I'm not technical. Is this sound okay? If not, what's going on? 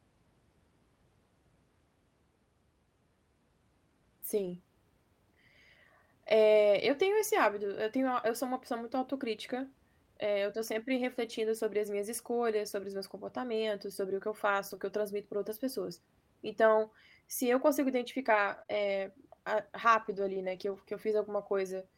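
No. Some parts of this speech were damaged on the way through the network.

The first fault is a lost packet rebuilt from error correction. Small chunks of the call went missing. A rough backup copy was played instead, so there is no gap. Those spots sound grainier and noisier. This happens at 4.37 to 4.51 s, at 11.25 s between "eh eu tô sempre" and "sobre as minhas escolhas", at 14.71 s, at 18.47 to 19.01 s after "se eu consigo", and at 20.01 to 20.75 s.

The second fault is short concealed packet loss. Here a sliver of sound arrived too late, with no backup copy. The receiver guessed by stretching the sound just before it. This gives a brief smear or wobble. It happens at 14.75 to 14.79 s, just before "que eu transmito pra", and twice in a row at 18.63 to 18.70 s.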